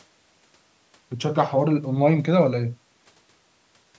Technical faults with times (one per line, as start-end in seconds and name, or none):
none